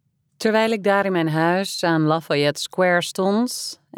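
No technical faults can be heard anywhere in the signal; its level, continuity and frequency content stay steady and intact throughout.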